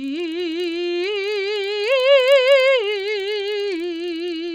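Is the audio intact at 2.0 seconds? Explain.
No. At 2.0 seconds, as throughout this music clip, the resampler restarted on every block. Each 40 ms block was converted from 16 kHz to 48 kHz in isolation, so the converter's filter saw silence or the wrong end of the block instead of the true neighbouring samples. Every block edge therefore carries a small error, heard as regular ticks at 25 Hz that are present only with signal.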